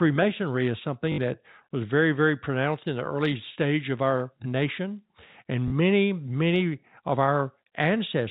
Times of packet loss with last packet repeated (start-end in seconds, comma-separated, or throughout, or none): 1.12-1.18, 5.68-5.72